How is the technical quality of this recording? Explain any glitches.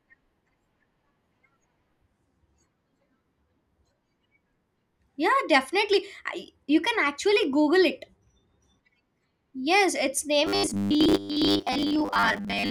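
The recording has one clear glitch, right at the end. From about 10.47 s to 12.71 s the speech goes robotic: a stiff, metallic buzz pinned at 100 Hz that still loosely tracks the talking. That's robotic sound from repeated short buffers, likely caused by audio arriving too slowly, so playback keeps looping the last chunk while fresh audio gets dropped. A 100 Hz buzz points to roughly 10 ms repeats, and most of that stretch seems to be repeats rather than real signal.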